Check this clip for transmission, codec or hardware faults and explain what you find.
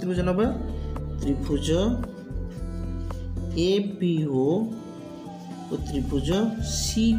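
I checked the clip for faults and found none to explain.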